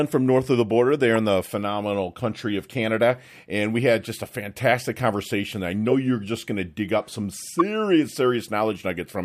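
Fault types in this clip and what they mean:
Corrupt frame decoded: at 1.16, 4.05, 5.90 and 7.59 s, damaged compressed frames were played anyway, scattering energy to wrong frequencies as brief blips.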